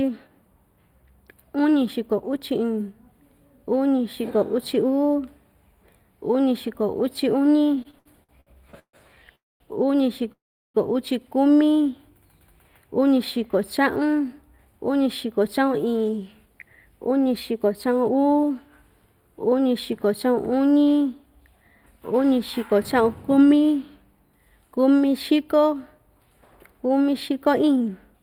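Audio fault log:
throughout: channel delay (comb filtering). One channel runs a few samples late, under a tenth of a millisecond, and the mono sum cancels shared content from a first notch near 7 kHz, sounding hollow or phasey with fixed notches.
7.75–8.96 s: repeated stalls (stutter). The jitter buffer ran empty eight times, with the longest wait 140 ms, and concealment filled 399 ms, about a third of the span, so the sound drags and stutters without losing anything.
9.35–9.63 s and 10.32–10.77 s: call audio freeze. Packets were likely held up in transit, so the receiver stretched the last sound into a fading fill of 248 ms and then 422 ms, mostly silence (220 ms and 370 ms). The sound then resumes where it stopped.
13.54–18.55 s and 27.00–28.21 s: jitter buffer speed-up. The overfull buffer was trimmed by removing short pitch-period pieces, about 0.4 s and then about 0.1 s in total, so the sound runs 109% and 108% fast at unchanged pitch and feels hurried.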